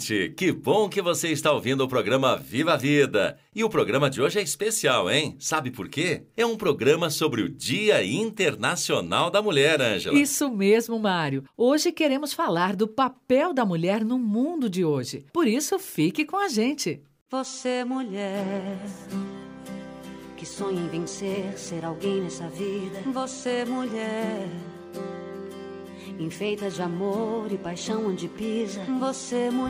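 Nothing technically wrong turns up anywhere in this audio, so there's no fault to point to or explain.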